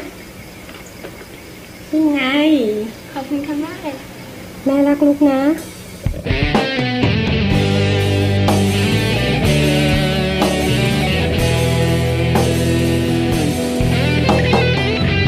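Nothing goes wrong anywhere in this audio; there's simply no technical fault to point to at any moment.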